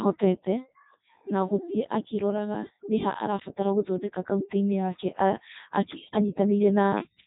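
Codec 2 vocoder damage runs through the whole speech clip. The voice sounds robotic and buzzy, rebuilt from sine waves driven by pitch, voicing, energy and a spectral envelope rather than from the original waveform. The heavy degradation fits the 3.2 kbit/s mode, and nothing is left above 3.8 kHz.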